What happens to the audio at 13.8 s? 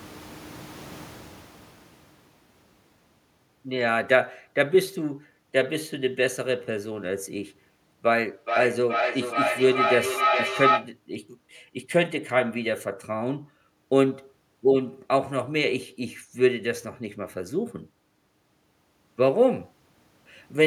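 At 13.8 s the speech carries on intact, with no dropout, distortion or abrupt jump in level.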